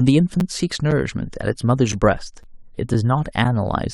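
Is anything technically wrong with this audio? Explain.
Yes. A gap between chunks occurs at 0.40, 0.91, 1.42, 1.92, 2.43, 2.94 and 3.44 s: the speech arrives in half-second chunks with about 7 ms of silence inserted at each join, heard as brief dropouts at a steady rhythm.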